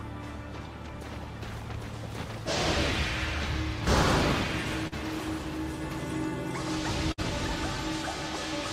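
Short concealed packet loss at 4.87 to 4.94 s: about 40 ms of audio failed to arrive in time, so the receiver extended the preceding sound for roughly 45 ms and then blended back into the real signal. It is heard as a brief smear or wobble.

A burst of packet loss at 7.12 to 7.20 s: about 60 ms went missing. The receiver continued the last sound for roughly 59 ms while turning it down, giving a short held, fading tail before the audio resumes with that stretch skipped.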